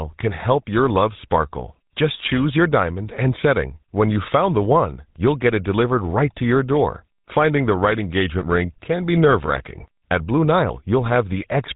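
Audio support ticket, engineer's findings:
GSM full-rate codec in the path, whole clip. Pulse-excited vocal-tract model, sparse excitation, roughly fits a 13 kbps full-rate encode. Speech carries a buzzy, gravelly roughness, plainly audible throughout; nothing above 3.8 kHz, so sibilants and brightness are dulled.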